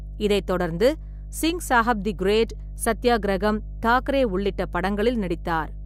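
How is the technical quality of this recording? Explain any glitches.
Mains hum runs through the whole speech clip: a steady 50 Hz tone sitting about 10 dB below the voice level. A ground loop or nearby transformer is leaking the power line into the signal, giving a constant low buzz with some low harmonics underneath everything.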